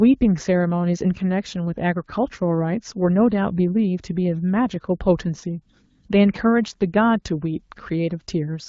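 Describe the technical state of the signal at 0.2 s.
At 0.2 s the speech is intact, with no fault present, and the AMR wideband (HD Voice) coding at 12.65 kbit/s leaves it clear.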